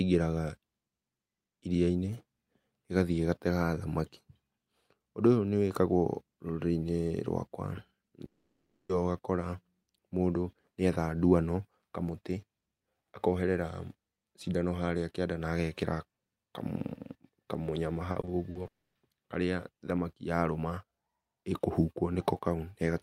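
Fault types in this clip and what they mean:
Long network dropout: Twice the speech cuts out and doesn't come back intact, likely because packets stopped arriving. After "rwakwa nĩ" at 8.25 s, about 0.64 s is lost, smeared briefly and then left silent. At 18.67 s, another 0.28 s goes quiet just before "harĩa thamaki yarũma".
Repeated packet loss (robotic sound): From 18.11 to 18.67 s, the speech hits five small holes in quick succession, the longest 40 ms. Each gets patched by stretching the previous sound, so about a quarter of that stretch is filler. It comes out choppy, right before the second dropout.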